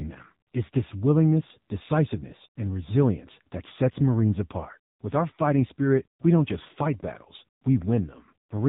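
AMR narrowband mobile codec damage runs through the whole speech clip: everything above 4 kHz is gone, and the vocal-tract model, starved of pulses, leaves the voice heavily buzzy and synthetic, consistent with a low mode near 6.7 kbps.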